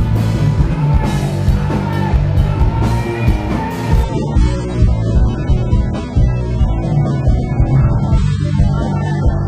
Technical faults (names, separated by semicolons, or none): adaptive stream at a lower bitrate